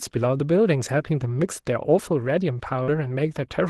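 At 2.83 s, a short concealed packet loss: about 40 ms of audio went missing and was patched by extending the preceding sound, heard as a brief smear rather than a hard dropout or click.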